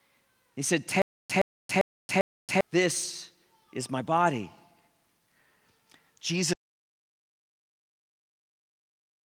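From 1.02 to 2.61 s there is a stutter with silent gaps: a 119 ms fragment repeats four times, every 397 ms, separated by 278 ms of digital silence, likely a playback stall, before "this is my body". At 6.35 to 6.41 s, a lost packet rebuilt from error correction leaves about 40 ms sounding rough and noisy, consistent with two packets recovered from low-bitrate redundant copies. From 6.54 s to the end, an audio dropout to silence leaves silence with no room tone, likely from lost input.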